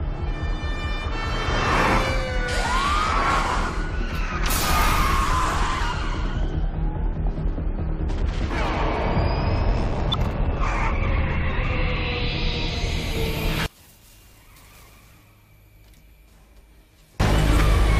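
At 4.61 to 4.65 s and again at 10.11 to 10.15 s the audio lurches forward with a glitch at each join, dropping around 50 ms and then around 100 ms. Compressed frames were skipped.

From 13.66 to 17.20 s the sound collapses by about 32 dB to a faint residue. Likely one channel is inverted in polarity, so summing to mono cancels most of the shared content and leaves only the small difference between the channels.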